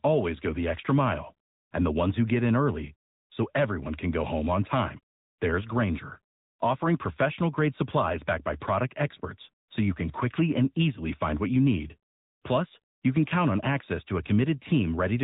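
It's a speech clip run through an AMR narrowband mobile codec the whole way, and the damage is plainly audible: nothing gets through above about 3.8 kHz, and the voice has that buzzy, synthetic edge of a pulse-driven vocal-tract model, which fits a high mode around 10.2 kbps.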